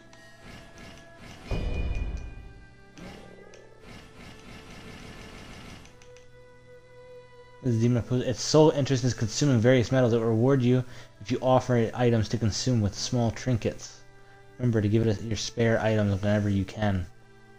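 Dropped samples at 1.97 s: a handful of samples, well under a millisecond, went missing, likely from a stream glitch, so the waveform jumps and gives one sharp click.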